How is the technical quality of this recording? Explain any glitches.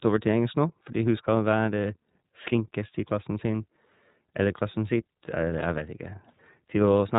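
The speech is band-limited and audibly coded from start to finish. Throughout, it sounds muffled, rough and slightly synthetic, with nothing above 3.8 kHz. That is the iLBC codec, coding each 30 ms frame independently, which fits roughly 13.3 kbps.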